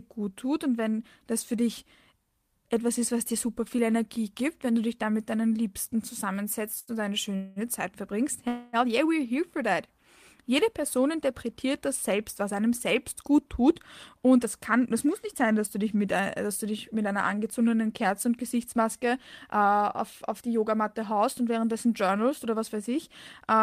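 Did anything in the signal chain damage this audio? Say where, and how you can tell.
Yes. At the network and jitter-buffer stage, a short stall from a late packet sits between 6.79 and 7.01 s. The buffer ran dry, and the receiver stretched the last sound by 80 ms until the packet arrived. A spectrogram shows frozen, smeared harmonics there. The waveform shows a repeated, looping cycle.

Two call audio freezes follow, at 7.36–7.59 s and 8.48–8.76 s, the second just before "yeah we're here for". They were likely caused by held-up packets. The receiver filled about 0.2 s and then 0.25 s with continued sound, never dropping to silence. On a spectrogram, those fills appear as flat, fading bands.

Jitter buffer speed-up runs from 14.18 to 16.20 s, ending before "dass du dich mit", at 107% speed. It runs again from 19.57 to 23.62 s at 106%. Pitch-period chunks were cut out many times, roughly 0.15 s and 0.3 s in total, so the audio sounds hurried. 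The spectrogram shows compressed syllables at unchanged pitch.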